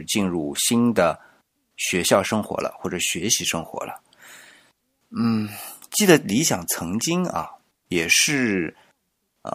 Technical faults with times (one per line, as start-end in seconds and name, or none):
none